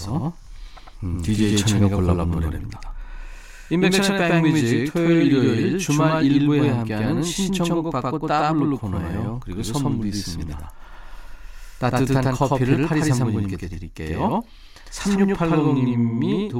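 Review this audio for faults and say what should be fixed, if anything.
A doubled audio track runs through the whole speech clip. A second copy trails by about a tenth of a second, at roughly equal level. It likely comes from the signal being captured twice. Route each source through a single capture path and monitor for duplicate inputs.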